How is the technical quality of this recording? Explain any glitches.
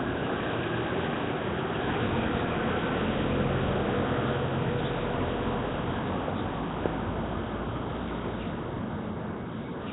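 The quality is pretty rough, and it stays that way from start to finish. The whole clip carries a gritty, hissy fizz and a smeared, underwater feel, with nothing at all above 3.9 kHz. That's the signature of Nellymoser compression, likely the old Flash microphone codec at a low rate, around 16 kbps. It squeezes each short block into a fixed, tiny bit budget, so quieter bands get no bits and are replaced with synthetic noise. The result is that rough halo and blurry texture on every sound.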